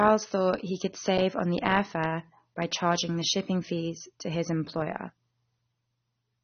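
The speech throughout is dull and smeared, with nothing above 6.3 kHz and a plainly audible warbling, fizzy texture on sibilants and sustained sounds. That points most likely to AAC compression, with AAC-LC at a low bitrate near 24 kbps starving the upper spectrum.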